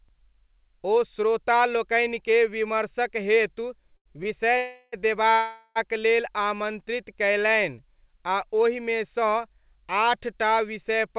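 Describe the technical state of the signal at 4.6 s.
At 4.6 s the call audio freezes from 4.58 to 4.95 s, likely because packets stalled and the jitter buffer ran dry. The receiver stretches the last sound into a fading buzz for about 0.35 s, then resumes where it stopped, nothing lost, just delayed.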